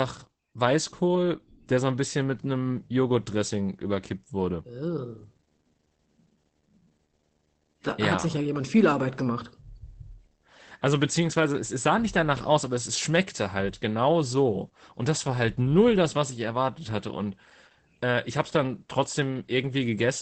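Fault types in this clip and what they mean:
Opus voice compression: The speech runs through Opus's SILK linear-prediction coder throughout. The band stops near 8 kHz, and the coarse excitation coding makes the speech plainly muffled, hoarse and slightly robotic. That fits a low rate of around 12 kbps.
Video or display buzz: A screen or video cable is leaking into the audio. A faint buzz at a 75 Hz field rate, with hash above it, sits well below the speech. It begins at about 1.8 s and lasts to the end.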